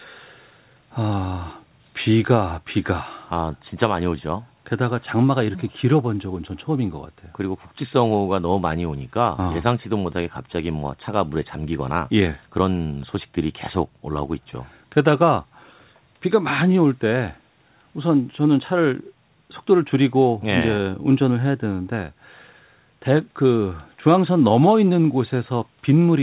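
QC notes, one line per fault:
No faults are heard in this speech clip. The sound carries the narrow telephone band of the WebRTC call path, with nothing above about 4 kHz, which fits G.711 mu-law coding.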